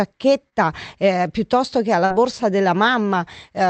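At 0.49 to 0.54 s, just before "eh piuttosto che", there is short concealed packet loss. About 20 ms of the speech arrived too late to decode. The receiver covered the gap by extending the preceding sound for about 25 ms, then blended back in. It heard as a brief smear. At 2.06 to 2.12 s, right after "eh piuttosto che", a longer loss of about 40 ms was patched over 42 ms, giving a brief wobble.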